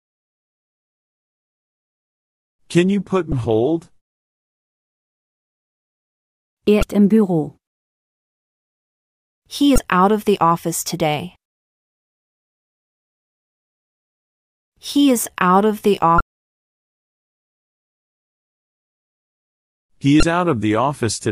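Brief glitches at 3.29–3.33, 6.79–6.83, 9.75–9.78, 16.17–16.21 and 20.20–20.23 s come from damaged data in a compressed stream, where the decoder misreads corrupted frames and resynchronises.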